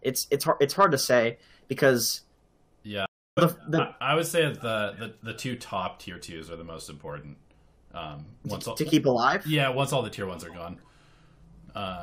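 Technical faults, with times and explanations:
3.06–3.39 s, stream reconnect: the speech drops out for about 310 ms and picks up again at "would the", with roughly a third of a second of material missing rather than repeated. The connection broke, the player fell silent, then reconnected and started a fresh decoder partway into the live stream, so playback resumes at the current position instead of where it stopped. The new decoder's first frame or two come up muted or faded in, softening the re-entry.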